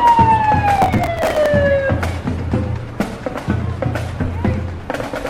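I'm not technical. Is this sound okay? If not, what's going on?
No. From 0.76 to 1.46 s there is processor overload crackle: the computer handling the audio fell behind and kept missing its deadlines, so dozens of tiny slices, each about 10 ms, were skipped. The rapid-fire gaps add up to a gritty crackling burst.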